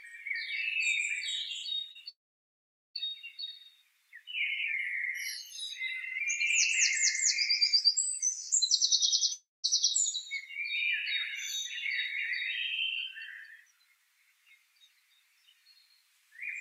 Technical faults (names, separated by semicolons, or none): short concealed packet loss; long network dropout